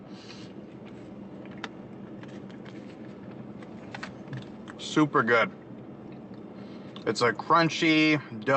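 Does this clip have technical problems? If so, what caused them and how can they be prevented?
No, this clip has no technical problems, so there is nothing to prevent.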